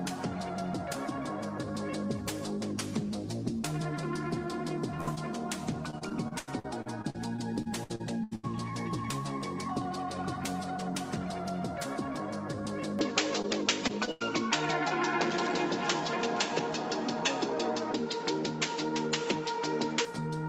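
At 5.01 s a burst of packet loss begins. It runs to 5.09 s. About 60 ms of audio never arrived in time. The receiver carried the last sound forward and let it fade, so a held buzz or dimming hiss fills the hole. When playback resumes, the missing stretch is simply gone.

At 5.15 s there is a short concealed packet loss, about 20 ms long. The decoder extended the preceding sound briefly and then blended back into real audio. It is heard as a small smear or wobble.

From 5.90 s to 8.45 s repeated packet loss causes robotic sound. Fifteen separate gaps occur, the longest 81 ms. Roughly a quarter of the stretch is patched-in audio. Each gap is bridged by extending the last sound, and the next gap arrives soon after. The effect is choppy, with fragments missing throughout.

At 12.99 s the tone changes with no silence at the transition. Nothing above 7.6 kHz survives, so the sound turns duller and narrower. 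The level shifts by a few dB. A new, faint noise floor appears, far below the signal. This is likely an input switched to a poorer device. The change holds until 20.05 s.

Within that stretch, from 13.42 s to 14.22 s, repeated packet loss returns. There are four gaps, the longest 93 ms. About a fifth of this span is concealed. It brings back the same choppy, robotic texture, with short pieces missing.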